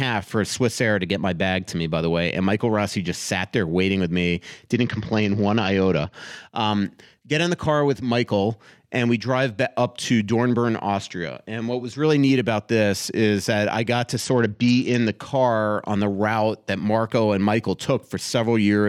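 From 4.73 to 6.13 s, and again from 14.17 to 15.13 s, the speech turns dull and gritty: a Bluetooth SBC bit pool drop. Link congestion forced the encoder to starve its upper sub-bands and coarsely quantise the rest, which fits a bit pool falling from 28 to 9, near 78 kbps. Unlike a switch to the hands-free profile, which stays narrowband, both dips are brief and the treble returns once the rate recovers.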